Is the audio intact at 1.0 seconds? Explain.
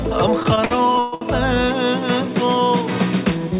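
No. At 1.0 s the sound is inside repeated stalls (stutter), spanning 0.40 to 1.23 s. The jitter buffer ran dry eight times, and each wait of up to 132 ms was filled by stretching the last sound, so it drags and stutters. A spectrogram shows smeared, flat-topped repeated patches; the waveform shows repeated cycles fading out.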